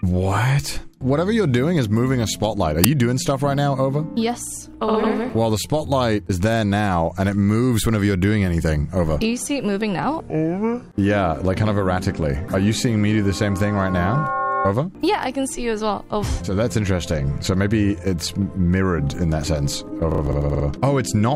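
File tags played as audio strike at 2.84 s, where a very brief burst of very loud static cuts in with hard edges and stops almost as abruptly. The player has treated part of the file's metadata, here an embedded cover picture, as sample data. Because that picture is stored in compressed form, its bytes look essentially random, so reading them as audio produces a flat, harsh white-noise blast that is very loud rather than a recognisable sound.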